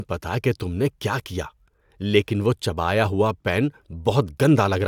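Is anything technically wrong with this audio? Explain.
No, nothing technical stands out in this speech recording, so there's nothing here to flag.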